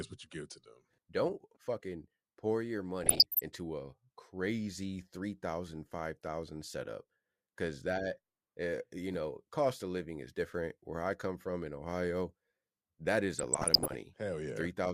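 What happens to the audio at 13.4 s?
Right after "that is", from 13.36 to 13.95 s, the speech breaks into DAB burbling. Bit errors at around half a percent slip past error correction into the MP2 data and corrupt samples and scale factors. Bad samples put short blips of noise into individual sub-bands, and bad scale factors make sub-bands jump in level for up to a frame.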